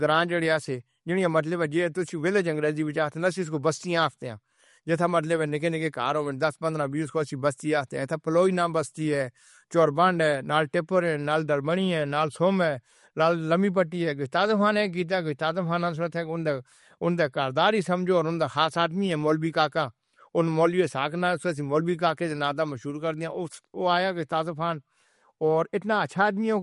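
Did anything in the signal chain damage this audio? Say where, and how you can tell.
Yes. MP3 compression damage runs through the whole speech clip, most likely introduced at the codec stage. Nothing reaches above 11.2 kHz, a hard shelf typical of an encoder short of bits, and the artefacts are plainly audible: a watery, swirling texture where weaker frequency lines drop in and out between frames. The encoder discarded treble and quiet detail to meet its budget, which fits a low bitrate around 48 kbps.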